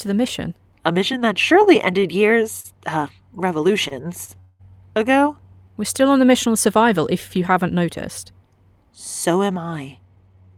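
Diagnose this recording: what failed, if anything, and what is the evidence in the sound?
Scattered short gaps from network packet loss run between 1.19 and 2.66 s: roughly four small holes, none longer than about 40 ms, together about a tenth of a second. The receiver continued the preceding sound through each, showing brief smeared, repeated-looking slivers on the spectrogram and short ticks in the waveform.

Two short stalls from a late packet sit in the jitter buffer stage, at 3.88 to 3.93 s (28 ms) and 4.25 to 4.30 s (29 ms). Each time the buffer ran dry and the last sound was stretched, giving short horizontal smears of frozen harmonics with a slight level dip, then resuming unbroken.

A call audio freeze spans 4.40 to 4.61 s, 194 ms of held, buzzy sound that fades without reaching silence, likely caused by packets delayed in the network emptying the jitter buffer. The spectrogram shows flat, decaying bands. 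Afterwards the sound picks up where it stopped, with nothing lost.

A jitter buffer speed-up begins at 9.98 s and runs to the end. The receiver trimmed pitch-period slices, about a tenth of a second in total, to shed excess delay, so the sound runs at 113% speed with unchanged pitch. Harmonic spacing stays constant while syllable-scale events crowd together on the time axis.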